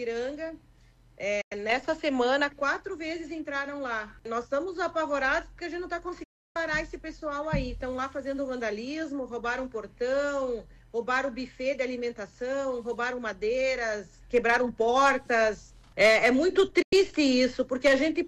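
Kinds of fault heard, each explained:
Digital broadcast dropout: The receiver lost usable frames and muted until good ones returned. The sound fades out within about 8 ms and goes silent. Gaps last 0.1 s at 1.41 s, 0.31 s at 6.23 s, and 0.1 s at 16.82 s. That audio is lost.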